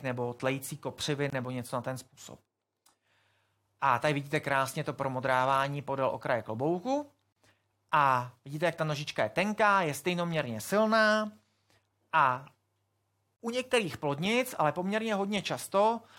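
At 1.30, 7.33 and 13.36 s the speech drops out briefly, about 25 ms, then 37 ms twice. This is a gap at a join of encoded pieces, recurring every 6 s. Separately encoded segments kept their start delay and end padding. Each hole has smeared edges.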